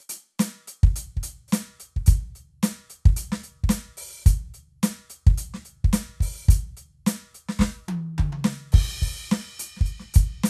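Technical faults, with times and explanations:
No technical faults are present in this music.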